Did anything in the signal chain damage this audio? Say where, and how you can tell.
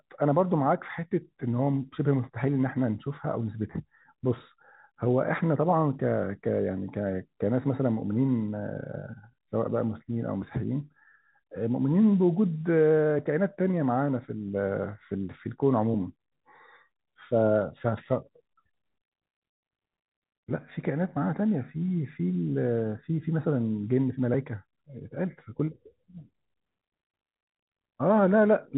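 No, nothing in the signal chain damaged this speech. It has passed through G.711 telephone coding as intended, so nothing above 4 kHz comes through, and any quantisation noise is faint and tracks the level of the speech.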